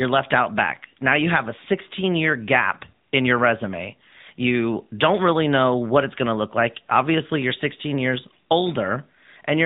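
Throughout the speech, an AMR narrowband mobile codec squeezes the audio to 8 kHz sampling, so a spectrogram shows nothing above 4 kHz. The plainly audible buzzy, synthetic edge fits a mid-rate mode near 10.2 kbps, with pulse-driven vocal-tract modelling replacing natural detail.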